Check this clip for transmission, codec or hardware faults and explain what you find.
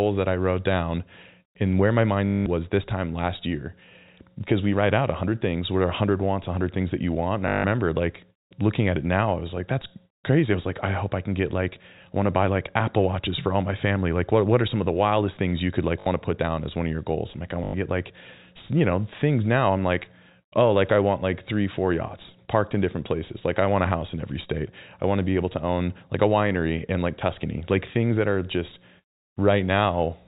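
The clip has repeated dropouts from packet loss with the last packet repeated. They fall at 2.27–2.46 s, 7.48–7.64 s (after "you want and i"), 16.00–16.06 s (after "things you could like") and 17.64–17.74 s (before "get like you know"). Lost packets were filled by replaying the previous one. The steps fit 20 ms packets. The loops ignore pitch, so longer runs buzz near 50 Hz, a brief robotic stutter. The G.711 telephone band beneath is heard as the 4 kHz ceiling.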